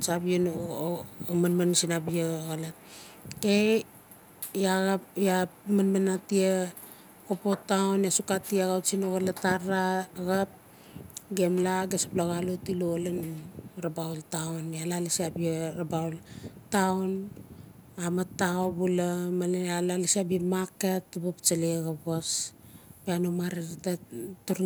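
Echo leak at 10.52–10.67 s, 16.54–16.70 s and 17.24–17.95 s in this speech: a faint copy trails the voice by 466 ms, some 30 to 40 dB down, likely from a far-end loudspeaker whose echo canceller let residual pickup back into the call.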